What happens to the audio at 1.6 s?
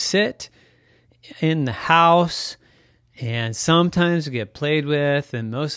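At 1.6 s the speech carries on without any audible fault; the audio is intact at that moment.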